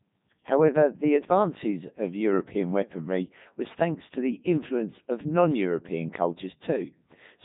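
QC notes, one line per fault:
Throughout: Codec 2 vocoder. The speech is heavily robotic and buzzy because it's rebuilt from sine waves, with nothing above 3.8 kHz. It sounds like the 3.2 kbit/s mode.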